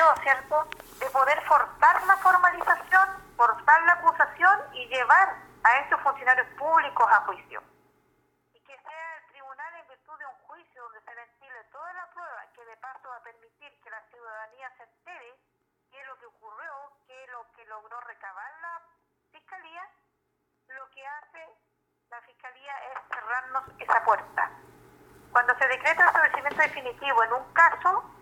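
Nothing goes wrong anywhere in this audio, so there's no technical fault to point to at any moment.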